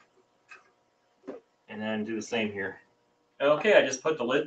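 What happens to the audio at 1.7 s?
At 1.7 s the sound climbs back up as the sound cut by the noise suppressor ends. From 0.0 s up to that point, the suppressor treated what it heard as noise and pulled it down, by about 15 dB at the deepest, across roughly a second and a half. So the opening sits sunken and thin before recovering there.

That cut comes from a noise suppressor applied to music or sounds. A speech-tuned suppressor stayed on the whole time and kept mistaking sustained material for noise. Its gain swings by something like 20 dB, so held parts and tails dip while attacks get through, and the level pumps and flutters.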